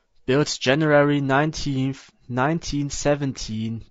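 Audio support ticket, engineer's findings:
Speech rough and grainy for the whole clip. Noise fills the gaps between voice harmonics. The top band sounds thin and synthetic. Likely low-delay AAC compression, AAC-ELD. Its short frames resolve pitch harmonics poorly. The damage fits a bitrate around 32 kbps.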